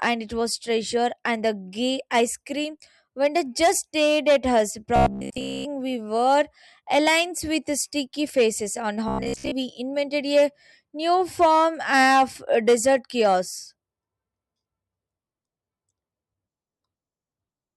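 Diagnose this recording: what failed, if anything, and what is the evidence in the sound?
The driver or buffer was likely starved, replaying its last chunk: robotic sound from repeated short buffers at 4.96–5.66 s and 9.08–9.53 s. Speech becomes a rigid metallic buzz at 66.8 Hz, fitting a 15 ms chunk, with most real audio skipped.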